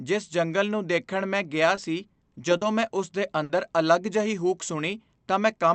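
At 1.75 to 1.79 s, just after "ਨੂੰ ਦੇਖਣ ਮੈਂ ਗਿਆ", there is a short concealed packet loss. About 20 ms of audio never arrived, and the receiver patched the hole by extending the preceding sound before blending back into the real signal. The result is a tiny smear rather than an audible gap. A second one falls at 2.57 to 2.63 s, just before "ਮੈਂ ਉਸ ਦੇ", where 40 ms was filled and is heard as a brief wobble.

The burst of packet loss at 3.43 to 3.51 s, right after "ਮੈਂ ਉਸ ਦੇ", is different in kind. About 60 ms went missing in one run, long enough that the concealment had to hold the last sound and let it fade. That produces a held buzz or a fading hiss instead of a momentary smear, and the speech then picks up further on with that stretch gone. Through the Opus call path, the audio stops at about 8 kHz.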